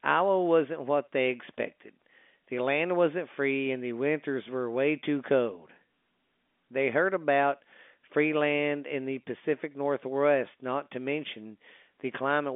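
No technical faults are heard at any point, so there is nothing to place in time order.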